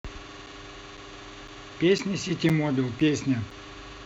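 At 0.46, 0.97, 1.48, 1.98, 2.49, 3.00 and 3.51 s the speech shows a gap between chunks: a 7 ms hard-edged silence every half second, visible as thin blank vertical stripes in the waveform and spectrogram.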